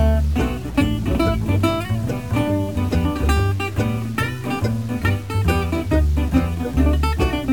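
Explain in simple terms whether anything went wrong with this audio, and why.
Something did go wrong: across the whole music clip, from start to finish, there is a grainy, gritty distortion that shifts along with the music. Quiet moments sound rough and gritty. The likely cause is low bit depth without dither, with each sample's fine detail cut off so only roughly 7 bits remain.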